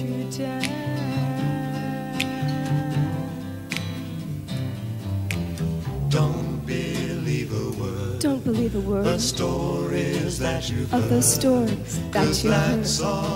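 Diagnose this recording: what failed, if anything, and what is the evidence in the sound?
A brief patch of short noise blips in single sub-bands at 7.91 s is DAB burbling at the codec stage. Weak reception let bit errors, on the order of a tenth of a percent, slip past error correction and corrupt MP2 samples and scale factors.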